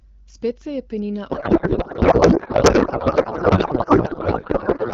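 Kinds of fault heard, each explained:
Codec payload misread: from 1.31 s, right after "se je penina", to the end, the speech turns into garbled noise and warble that barely tracks it. This fits octet-aligned AMR-WB frames read as bandwidth-efficient, scrambling every field.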